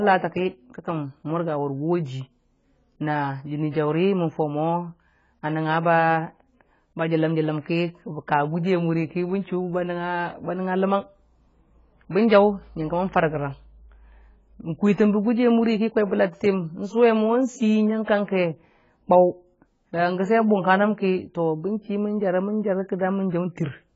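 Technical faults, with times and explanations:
throughout, AAC compression: nothing above 7.6 kHz, a dull, smeared sound with warbling sibilants, likely from AAC-LC coding at a bitrate that fits 16 kbps.
18.04 to 18.08 s, pre-echo: a 36 ms hiss comes just before a sharp onset, because the codec spread that attack's quantisation noise back across the block.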